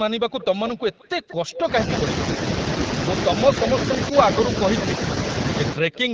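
From 0.3 to 1.67 s there's an echo leak: a faint copy of the speech trails about 183 ms behind, roughly 15 dB down, likely from a loudspeaker the far end's echo canceller didn't fully clean up. Around 4.09 to 4.15 s, the speech suppressed in double talk shows up as a quick dip of roughly 10 dB, likely the canceller ducking everything while both sides overlap. The same 183 ms echo leaks back briefly at 5.92 to 6.05 s.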